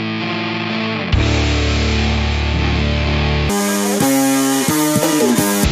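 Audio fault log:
3.50–5.64 s, wrong sample rate: the sound abruptly runs 2.76 times too fast and 17.6 semitones high, consistent with 16 kHz material played at 44.1 kHz unconverted. A spectrogram shows every component shifted sharply upward and spread wider; the waveform's features crowd closer together.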